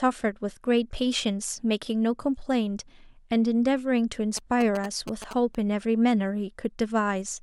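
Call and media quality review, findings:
GSM signalling bursts, 4.37 to 5.55 s over speech. Galloping dit-dit-dit of short buzzes at roughly 10 dB below the speech, 217 Hz repeat. Nearby 2G handset signalling, rectified in the audio circuit. Grouped bursts, not a steady hum like mains interference.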